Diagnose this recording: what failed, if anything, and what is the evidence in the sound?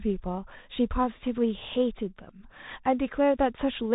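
The codec stage failed: the speech has passed through a Bluetooth CVSD headset codec for the whole clip. Nothing reaches above about 3.8 kHz, and the codec damage is plainly audible. Sibilants turn scratchy, a granular hiss sits beneath the speech, and loud, bright moments distort where the one-bit up-or-down steps can't follow the waveform fast enough, which fits a 64 kbps stream. A plain band-limit or narrowband PCM link would sound dull but clean, without that grain and slope distortion.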